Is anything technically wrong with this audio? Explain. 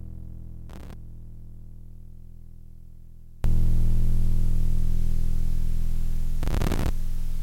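Yes. From 0.0 to 3.44 s the music drops by about 26 dB to a faint copy, with the centre gone. The likely cause is one channel inverted cancelling in mono, unlike a plain fade, which keeps everything.

Processor overload crackle tears through 0.70 to 0.93 s and 6.43 to 6.89 s. Many missed deadlines each replay a fragment of old audio, fitting buffers of around 5 ms. Unlike clipping, it ignores loud peaks.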